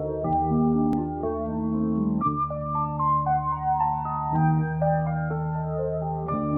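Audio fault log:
0.93–0.97 s, overlap between stream segments: about 40 ms of music is cut where two segments meet, so the waveform jumps with a tiny skip rather than a silent dropout gap.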